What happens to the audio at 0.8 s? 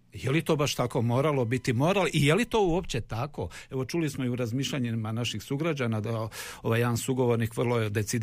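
At 0.8 s a USB whine is present. It runs from about 0.74 s to 2.74 s as a steady, fixed-pitch tone at 1 kHz, faint at roughly 40 dB below the speech. It comes from the USB bus pulling current in 1 ms frames, and that regular draw leaks into the audio through the power or ground path. Mains hum sits at 50 or 60 Hz and its low harmonics. This whine is pinned at exactly the 1 kHz frame rate instead.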